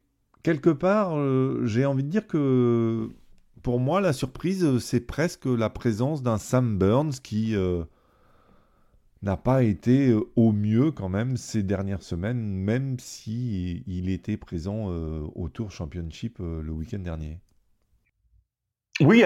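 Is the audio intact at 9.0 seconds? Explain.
No. A faint hiss and roughness rides on the louder, brighter speech from 3.79 s, just after "de dire que pour", to the end. This is sample clock jitter: timing errors of a microsecond or two, strongest on steep waveform slopes, about 45 dB down.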